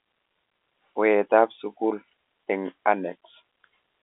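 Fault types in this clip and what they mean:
No faults can be heard anywhere in this recording.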